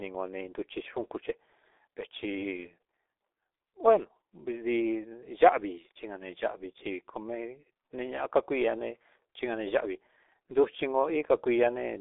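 Speech runs through the G.723.1 codec for the whole clip. Nothing below 300 Hz or above 3.6 kHz survives, so it sounds muffled. The damage is heavy. The voice turns hoarse and consonants blur, which fits a coder of roughly 6 kbit/s with long frames.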